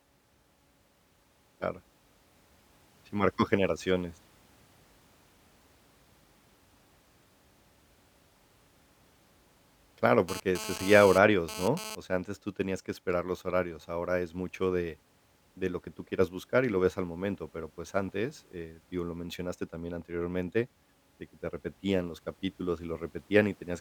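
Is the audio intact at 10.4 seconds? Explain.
No. At 10.4 seconds the speech is overlaid by GSM phone buzz, which runs from 10.29 to 11.95 s and stops just before "sea antes tú tenías". A nearby 2G phone transmits in bursts about 217 times a second. The audio circuit rectifies those radio pulses into the signal. The result is a hard, raspy buzz at about 217 Hz, rich in harmonics and about 10 dB below the speech. It comes and goes, as a data transfer does.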